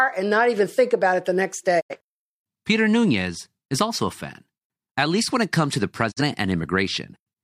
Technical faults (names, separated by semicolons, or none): digital broadcast dropout